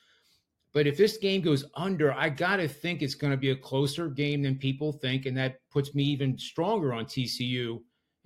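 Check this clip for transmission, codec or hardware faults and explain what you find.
Nothing stood out on listening to the speech in this clip.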